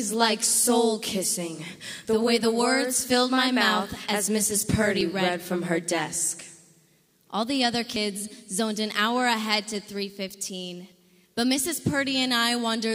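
Audio missing between chunks occurs at 2.05, 5.01, 7.96 and 10.92 s, each a brief skip where the sound jumps forward abruptly and the two sides butt together with no gap of silence. The skips recur almost exactly every three seconds, with around 40 ms gone each time, which points to a recorder or processor working in 3-second blocks that likely drops a sliver of input while closing one block and opening the next.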